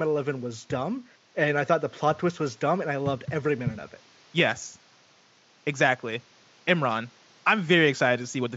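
Nothing stood out on listening to this speech clip, apart from a faint room noise sitting about 33 dB below the speech, which belongs to the recording space rather than the system.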